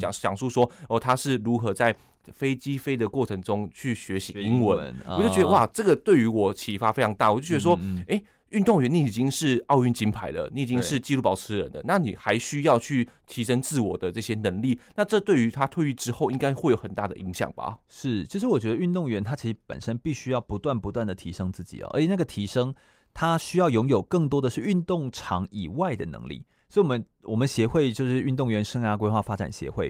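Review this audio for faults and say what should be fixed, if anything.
Nothing needs fixing, as the signal stays technically sound throughout with no faults to report.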